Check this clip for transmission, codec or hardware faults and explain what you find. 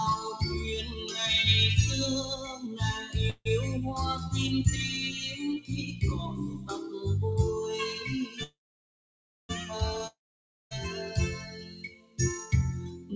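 Yes, there are several. The whole clip runs through a call path with nothing above 8 kHz, which fits G.722 at 64 kbps, and the faults sit on top of that.

Noise suppressor applied to music or sounds: Throughout, a suppressor built for speech treats sustained material as noise, so the sound pumps and thins, with level swinging by around 10 dB.

Sound cut by the noise suppressor: At 0.83–1.03 s, 2.33–2.80 s, 5.60–6.03 s, 6.30–6.70 s, 11.36–12.19 s and 12.90–13.14 s, held parts and decays get pushed down by about 5 to 13 dB. The later spans take the deepest cuts, around 13 dB.

Call audio freeze: At 3.30–3.47 s the audio stalls for about 155 ms, a short fading fill then a brief silence, and it resumes where it left off. At 8.43–9.51 s it stalls for about 1.06 s, almost all of it silent. Nothing is lost either time. Likely cause: delayed packets draining the jitter buffer.

Long network dropout: At 10.07–10.73 s the sound fades into about 0.55 s of silence, then jumps ahead with roughly 0.64 s of audio missing, likely because those packets never arrived.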